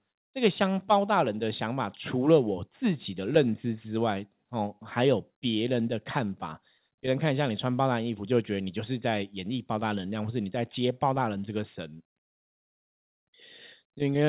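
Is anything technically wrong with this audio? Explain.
No, nothing stood out on listening to this speech clip.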